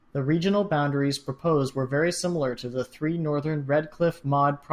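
No technical faults can be heard anywhere in the speech recording: the signal stays continuous and stable throughout, with no audible disruption to its level, timing or frequency content.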